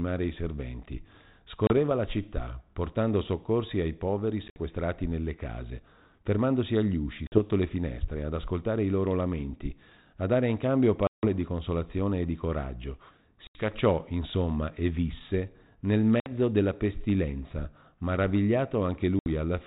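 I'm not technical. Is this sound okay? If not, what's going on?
No. Packet loss on an ADPCM call cuts brief silent holes at 1.67, 4.48, 7.27, 11.07, 13.47, 16.2 and 19.19 s. Unlike a simple dropout, the speech then resumes slightly distorted, settling within a split second.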